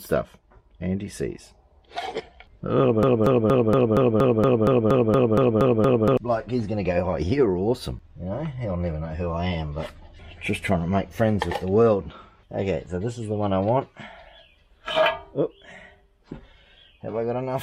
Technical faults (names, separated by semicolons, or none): broken-record loop